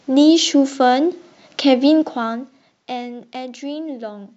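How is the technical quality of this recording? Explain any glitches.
The recording has one glitch, a zipper noise during a level drop.

Zipper noise, from 1.99 to 2.87 s: the level falls by roughly 15 dB in coarse, unsmoothed steps, about 30 per second. Each jump leaves a tiny click, so a rapid ticking, zipping texture rides on the speech as it fades.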